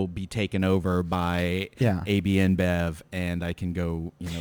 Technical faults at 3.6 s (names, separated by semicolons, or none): sample clock jitter